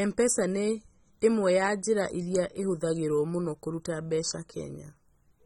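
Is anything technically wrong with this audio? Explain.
Yes. AAC compression damage runs through the whole speech clip and is plainly audible. Nothing is present above about 16.9 kHz, so the top end sounds dull. Sibilants take on a smeared, fizzy edge, and sustained sounds warble. The likely cause is AAC-LC coding at a low bitrate, around 24 kbps. The encoder quantises each frame against a hearing model. With so few bits, it cuts the highest band and leaves gaps that blur the detail.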